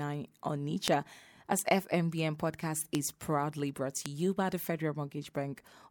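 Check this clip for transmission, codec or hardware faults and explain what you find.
There are four bit error spikes in this speech, at 0.88, 1.59, 2.95 and 4.06 s. Each is a flipped bit that briefly throws two or three samples by a power of two. You hear a sharp broadband tick unrelated to the voice, peaking near about -8 dBFS for the first two and about -14 dBFS for the last two.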